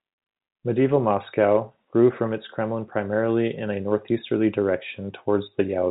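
Nothing in this speech recording points to a technical problem. It comes through G.711 telephone coding, which shows in the narrow band that stops at 4 kHz, with any quantisation noise under the speech faint at most.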